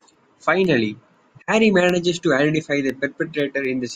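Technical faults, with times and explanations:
0.14 to 3.90 s: periodic USB or driver dropouts. A tick recurs every 0.25 s, around fifteen times across the speech. Each time, a tiny sliver of audio, a small fraction of a millisecond, drops out and is replaced by silence. Something in the system is briefly stalling the USB bus or the audio driver on a fixed schedule. The sudden gap in the waveform produces a click, audible only where there is signal.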